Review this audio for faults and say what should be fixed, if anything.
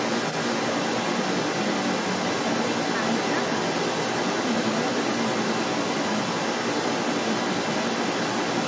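From 0.0 to 8.7 s, a second voice runs alongside the speech, roughly 5 dB louder than it. The likely cause is the other side's voice leaking through: the far end's audio plays from the talker's loudspeaker, reaches the microphone, and the echo canceller leaves much of it in. Room reverberation would only smear the talker's own speech, but this is a separate, independent voice. The band ends at 8 kHz, as expected from call microphone processing. Prevent it by using a headset or better echo cancellation.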